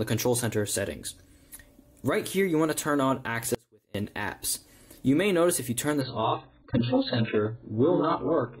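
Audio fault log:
3.55 to 3.95 s, audio dropout to a faint residue: the sound cuts off abruptly for about 0.4 s. The gap is not silent; a faint trace of the same sound continues, roughly 35 dB below its normal level, before the full signal snaps back in mid-flow. The break is too sudden for a pause or a fade, so the likely cause is a brief loss of the wanted signal while the path after the break stayed live and passed only a low leak.
6.01 to 8.6 s, adaptive stream at a lower bitrate: the sound abruptly turns dull and smeared, and the quality stays down until the end of the clip. Nothing is audible above 4.5 kHz, and the remaining band carries coarse, watery codec artefacts. There is no gap at the switch, only a sudden change in quality. This fits an adaptive stream stepping down from an AAC rendition near 96 kbit/s to one near 8 kbit/s.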